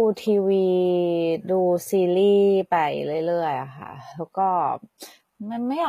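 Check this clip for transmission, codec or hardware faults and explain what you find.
One codec fault runs through the whole clip. Throughout, the sibilants sound gritty and lispy and nothing is present above about 14.9 kHz, which points to HE-AAC compression at a low bitrate, likely around 20 kbps. The treble is rebuilt by copying lower bands upward, so harmonics misalign above the crossover.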